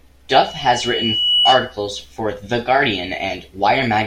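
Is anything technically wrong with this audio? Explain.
Yes. From 0.33 to 1.77 s there is loudspeaker feedback squeal: a microphone was picking up the loudspeaker it fed, and at 2.9 kHz the loop gain went above one. That tone swells over about a second into a piercing whistle, peaking roughly 5 dB above the speech.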